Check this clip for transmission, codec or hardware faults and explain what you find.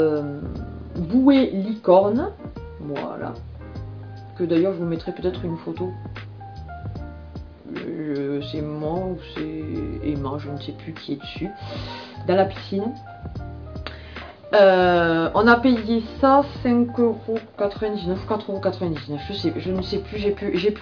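No transmission, codec or hardware faults are audible anywhere.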